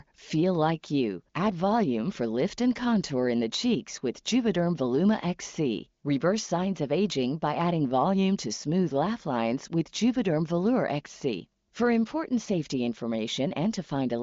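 No technical faults are audible.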